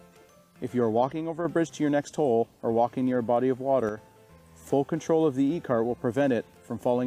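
At 1.13 to 1.45 s and again at 3.89 to 3.97 s, the sound abruptly drops by about 6 dB, then snaps back. The likely cause is one channel dropping out: one stereo side goes silent, halving the shared content in the mono sum.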